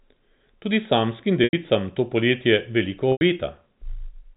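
Packet loss with pitch repetition occurs twice, from 1.44 to 1.53 s, just before "to poletje veliko", and from 3.12 to 3.21 s, right after "to poletje veliko". Each gap lasts 90 ms, which fits three lost 30 ms packets. The receiver filled each hole by looping the last pitch period, heard as a brief buzzy hold that fades to silence before the speech cross-fades back in, all within the narrow telephone band of the G.711 link.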